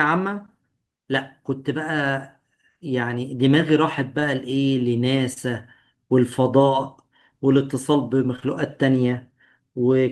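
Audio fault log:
4.19–4.23 s, short concealed packet loss: 20 ms of the call arrived too late. The decoder extended the preceding sound to cover it, then blended back. It gives a brief smear.
5.33–5.38 s, short concealed packet loss: another 20 ms gap, patched by continuing the last sound. A brief wobble results.
8.36–8.43 s, short concealed packet loss: two back-to-back 20 ms losses. The patch smears, and a short sound can drop out.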